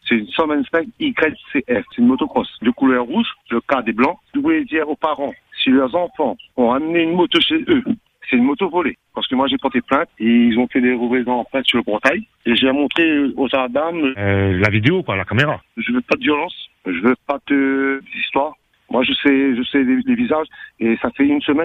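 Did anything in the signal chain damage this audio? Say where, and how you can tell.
Yes, at the codec stage: compressed frames skipped, at 3.09 s, 4.82 s and 17.39 s. At each point the sound jumps forward by about 20, 40 and 70 ms, which fits one, two and three frames of roughly 21.3 ms lost or rejected by the decoder. A buffer underrun would instead leave a silent gap or a sharp click with nothing missing.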